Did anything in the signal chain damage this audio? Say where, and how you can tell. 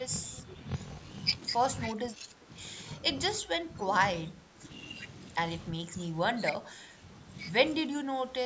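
Yes, two things. At the driver or buffer stage there's a block size mismatch (padded) running through the whole clip. A steady buzz sits under the speech at about 43.1 Hz, and everything plays at 0.861 times normal speed with the pitch left roughly where it should be. That fits one stage writing short blocks into a 1024-sample read, with the shortfall in each block zero-filled, so every block carries a little silent gap.

The second problem is in call processing: speech suppressed in double talk, in five spots: 1.94–2.5 s, 3.41–4.01 s, 4.25–4.67 s, 5.7–7.02 s and 7.87–8.38 s. In each one the talker drops by roughly 10 to 15 dB, dulls or breaks up, and the longest patch lasts about a second. That's likely the echo canceller getting confused while the far end was talking too, and ducking everything rather than risk passing echo.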